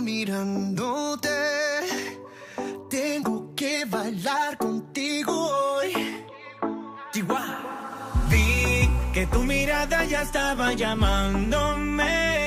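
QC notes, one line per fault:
Nothing to flag here; I listened all the way through and didn't hear any problems.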